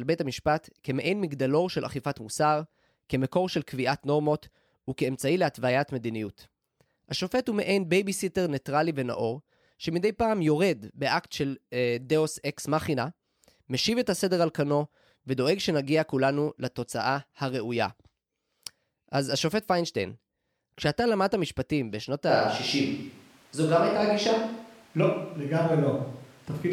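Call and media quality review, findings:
Switch to a distant microphone, 22.29 s to end. Speech abruptly turns roomy, hollow, thinner in bass; level roughly unchanged, room noise about 35 dB below speech. Likely cause: close mic dropped out, farther pickup took over.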